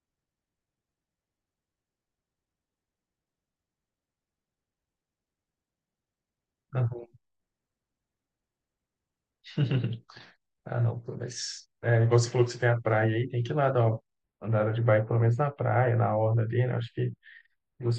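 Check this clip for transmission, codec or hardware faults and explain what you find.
One fault: channel delay (comb filtering) from 14.23 s to the end. One channel is late by only a few samples, well under a millisecond, and the mono sum cancels near 7 kHz, giving the speech a hollow, phasey colour. Unlike a low-pass cut, the fixed notch leaves energy above it.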